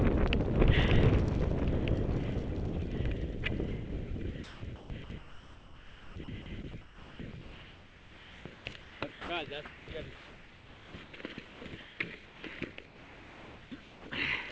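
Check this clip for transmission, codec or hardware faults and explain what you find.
Voice-detector faults run through the clip from 4.44 s onward, heard over a call path with nothing above 8 kHz, which fits G.722.

Sound chopped by the voice detector, 4.44 to 9.29 s: the sender likely toggled transmission on and off repeatedly, so stretches of sound give way to synthetic fill.

Comfort noise in place of the background, 9.65 to 9.87 s, 10.15 to 11.99 s and 12.25 to 14.05 s: sending likely paused, and the receiver filled the gaps with steady, featureless noise. In the first gap, this noise sits about 1 dB lower.

Sound dropped by the voice detector, at 11.21 s and 12.59 s: quiet sound was likely taken for background and not sent, so brief fragments vanish into noise before the sound resumes.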